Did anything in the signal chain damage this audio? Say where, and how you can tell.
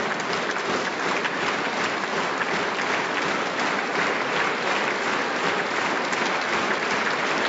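No, the signal chain shows no damage: the only processing that can be heard is the call microphone path, which trims the lowest bass, as that stage normally does.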